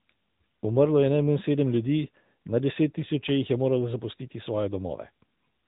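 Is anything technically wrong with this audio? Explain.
Yes. Throughout, AMR narrowband mobile codec damage is plainly audible: nothing passes above 3.8 kHz, and pulse-driven vocal-tract modelling gives the speech a buzzy, synthetic edge, consistent with a high-rate mode near 10.2 kbps.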